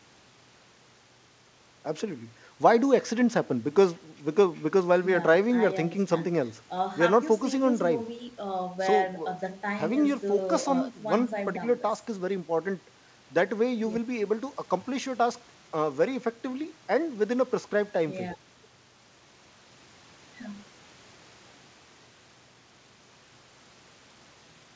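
Nothing goes wrong anywhere in this speech; it just comes over a call link whose top end stops at 8 kHz, which fits G.722 at 64 kbps and is simply how that kind of path sounds.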